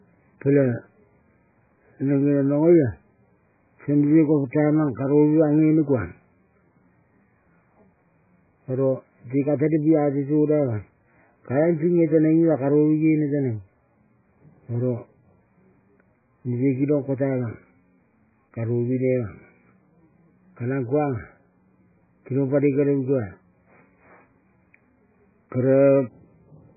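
From start to finish the speech carries heavy damage from what is likely MP3 compression. Nothing is heard above 2.5 kHz. The treble is simply gone, which fits a very low bitrate around 8 kbps. Starved of bits, the encoder drops the high band and zeroes weak frequency lines. Those lines flicker on and off between frames. The result sounds watery and swirly. S sounds turn dull or chirpy, and attacks smear.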